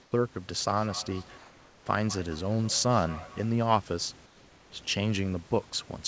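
From 0.02 to 0.12 s, the room background gives way to a steady, featureless hiss about 6 dB quieter. This is comfort noise in place of the background, likely from discontinuous transmission. Unlike a dropout, noise continues rather than silence.

From 0.69 to 3.54 s, feedback echo between two devices sends the speech round again at roughly 200 ms intervals, peaking about 17 dB below the speech. The repeats are distinct, thinning copies rather than a smooth room tail.

The same flat comfort noise replaces the background from 1.38 to 1.86 s, about 2 dB quieter, and from 4.26 to 4.72 s, about 3 dB quieter.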